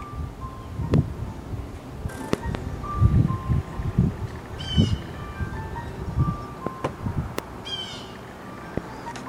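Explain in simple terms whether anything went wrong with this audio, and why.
Loud pops, likely from a plug, switch or static surge, land at 0.94, 2.33 (a quick double, through 2.57), 6.67, 7.39 and 8.78 seconds; the sound keeps going underneath each one.

Compressed frames skipped at 2.08, 4.25, 7.15 and 9.11 seconds make the audio jump ahead, by about half a second, a tenth, a fifth and a fifth.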